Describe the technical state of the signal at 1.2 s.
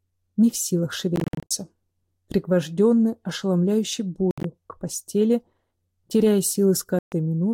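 Bluetooth dropout, 1.16 to 1.51 s: at 1.2 s the sound breaks into a string of short silent gaps, the longest 53 ms, totalling 200 ms. Packets likely reached the headphones too late and were discarded, so playback resumes further on, as though it had continued.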